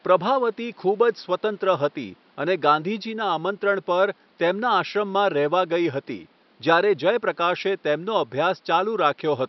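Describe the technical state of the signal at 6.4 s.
At 6.4 s the speech signal is intact, with only the room's own background noise sitting about 37 dB beneath it.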